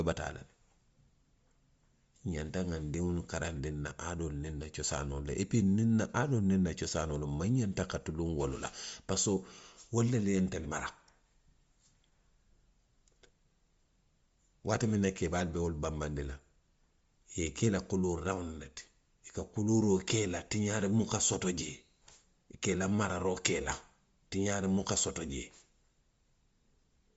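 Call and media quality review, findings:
Bluetooth LC3 compression, whole clip: speech band stops near 7.7 kHz, grainy noise-filled top end, likely an LC3 link around 32 kbps with 10 ms frames.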